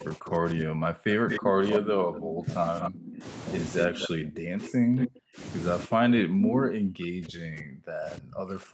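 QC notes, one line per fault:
0.0–3.25 s, 3.87–5.41 s and 5.86–8.74 s: speech suppressed in double talk. The level repeatedly sinks, at its deepest by roughly 40 dB. This is likely the echo canceller ducking the near talker while the far side speaks. Unlike a dropout, the gaps follow the overlapping talk.
1.3–1.79 s, 2.5–2.9 s, 3.82–4.08 s, 4.99–5.08 s and 6.43–6.63 s: echo leak. A second copy of the sound trails the original by 235 ms, and by 344 ms at 6.43 s. It plays about 5 dB below the speech at first, about 10 dB below around 3.82 s, and at roughly the speech's own level from 4.99 s. This is likely residual loudspeaker pickup the echo canceller missed. Its distinct lag separates it from room reverb.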